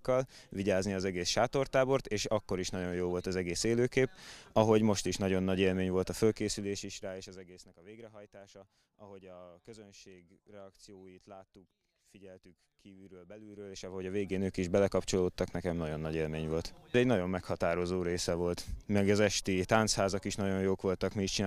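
No technical faults are audible anywhere in the clip.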